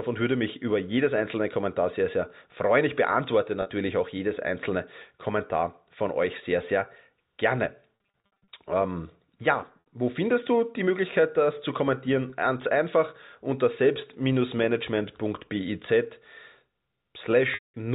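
Packet loss with pitch repetition occurs at 3.62 s (40 ms lost), across 7.97 to 8.48 s (320 ms scattered over 520 ms, longest run 60 ms), at 9.80 s (60 ms), at 12.30 s (20 ms) and from 17.54 to 17.74 s (200 ms). The gaps suggest 20 ms packets. The receiver bridges each gap by looping the last pitch period. Short losses come through as a briefly held, buzzy tone. The 200 ms loss fades to silence before the speech returns, all over narrowband telephone-coded audio.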